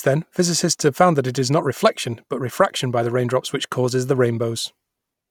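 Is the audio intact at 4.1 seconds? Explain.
Yes, at 4.1 seconds the audio is intact, with no audible fault at that moment.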